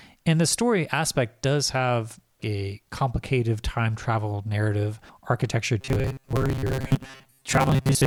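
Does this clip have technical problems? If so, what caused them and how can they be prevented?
Yes: after "time travel narrative architecture", from 5.81 s to the end, there's robotic sound from repeated short buffers, a metallic 133 Hz buzz with roughly half the audio being re-played chunks of about 7.5 ms, likely from audio arriving too slowly. Bigger jitter buffers or steadier network and CPU headroom would prevent it.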